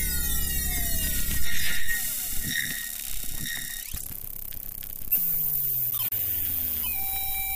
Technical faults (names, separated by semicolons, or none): processor overload crackle